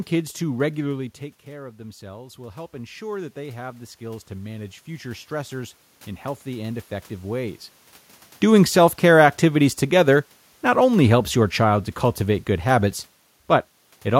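A short speech clip, and the level wanders around in two places. Right after "kids to", around 1 s, the talker drops back from the mic by about 14 dB, and the automatic gain rising kicks in to compensate. From 0.95 s to 5.84 s you can hear the gain creep up by about 9 dB, pulling the voice back up along with the room noise underneath it, so the background swells too. It never quite catches the full drop before settling at "in healthy and effective". The second one is the reverse. The talker moves around 7.5 s, and the automatic gain falling brings things down by about 4 dB over 8.44 s to 11.9 s. Voice and room tone sink together during that stretch, and the level only settles by "cultivate good habits". In both cases the control is reacting slowly, so the level ramps over a few seconds instead of tracking the voice.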